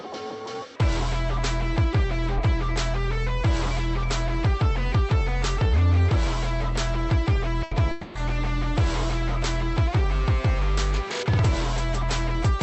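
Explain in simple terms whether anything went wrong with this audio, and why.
Two things go wrong close together, both from the call's network connection. First, at 7.63 to 7.74 s there's a burst of packet loss: a short run of audio never arrived, so the receiver stretched the last bit of sound into a brief fading buzz or hiss for about 80 ms, then jumped ahead, skipping a chunk.

Then from 7.91 to 8.18 s comes what sounds like a long network dropout, most likely the connection stalling. Again the last sound gets smeared out and fades over roughly a quarter of a second, with no true silence, and when the audio comes back a piece is simply gone.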